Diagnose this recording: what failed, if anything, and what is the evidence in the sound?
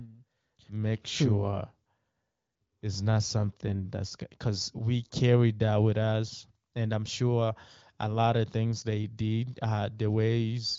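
Nothing in the recording has failed; no stage shows a fault. The speech has the band-limited character of AMR wideband (HD Voice) coding, with nothing above about 7.5 kHz, and little if any coding damage, which points to one of the codec's higher rates, around 23 kbit/s.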